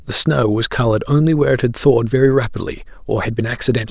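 Nothing technically wrong turns up in this short bit of speech; there's no fault to point to anywhere in it.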